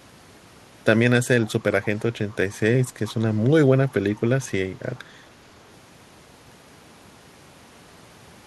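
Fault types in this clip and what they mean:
Echo leak: faint, delayed copies of the speech, about 0.42 s behind, surface at 1.45–1.52 s and 3.07–3.13 s, some 25 to 30 dB down, likely from an echo canceller missing loudspeaker pickup; on a spectrogram, weak ghost harmonics trail the originals.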